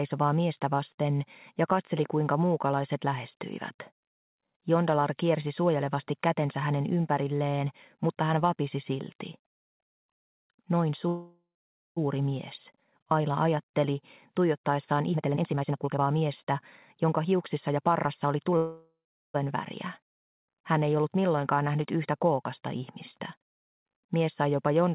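Audio arrives over a call path with nothing above 4 kHz, which fits G.711 mu-law at 64 kbps. Two call audio freezes occur, at 11.08 to 11.98 s and 18.57 to 19.36 s. Each holds the last sound as a fading buzz or hiss, then silence of 0.51 s and 0.38 s. Playback resumes where it stopped, so about 0.88 s and 0.77 s of gap are added. A jitter buffer that ran empty after packets were held up is the likely cause. Two jitter buffer speed-ups follow the first freeze as the receiver sheds that built-up delay. From 15.10 to 16.45 s the audio runs at 150% speed with pitch unchanged, and it sounds clearly hurried. Roughly 0.7 s is trimmed in short pitch-period slices. From 17.04 to 18.52 s a milder 109% speed-up removes about 0.15 s.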